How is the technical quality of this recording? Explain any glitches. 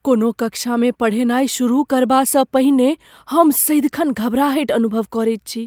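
Nothing in the speech here stands out as a glitch, so there's no technical fault to explain.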